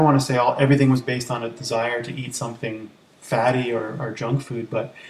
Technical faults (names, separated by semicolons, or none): none